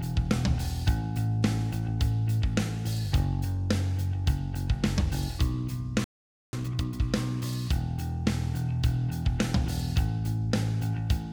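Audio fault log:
6.04–6.53 s, playback stall: the sound stops dead for 0.49 s, likely because the player ran out of buffered data, then carries on.
6.53–7.01 s, time-compressed catch-up: the backlog is cleared at 2x speed by splicing out small pieces, so the audio hurries at normal pitch.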